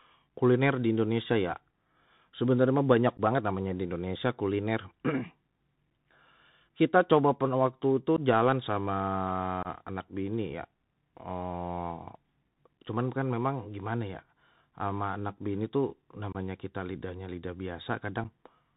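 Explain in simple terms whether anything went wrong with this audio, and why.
The whole clip went through a Bluetooth CVSD headset codec. It cuts everything above 4 kHz, so the speech sounds muffled, with scratchy s sounds and a grainy hiss.

There is also unconcealed Bluetooth headset packet loss. Short holes of about 8 to 23 ms, at 3.17, 6.04, 8.16, 9.63, 16.33 and 18.24 s, leave abrupt gaps.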